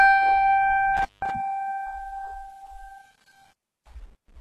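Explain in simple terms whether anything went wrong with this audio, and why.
Intermittent contact, from 0.97 to 1.30 s: the music drops out for about 171 ms with a crackle at each edge, as a loose cable or plug briefly loses its connection, leaving only faint hiss until the contact closes again and the sound returns.

HE-AAC compression, throughout: the treble of this music sounds gritty and metallic, and nothing reaches above about 12.3 kHz. The likely cause is heavy low-bitrate HE-AAC coding, which keeps only the lower range and fakes the highs by copying lower bands upward.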